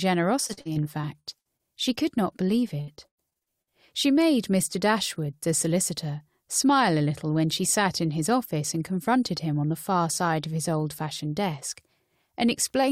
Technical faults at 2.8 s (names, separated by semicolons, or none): repeated packet loss (robotic sound)